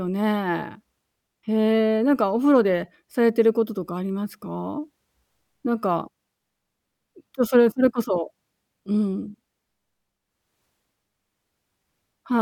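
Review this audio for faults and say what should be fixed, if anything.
No faults; nothing needs fixing.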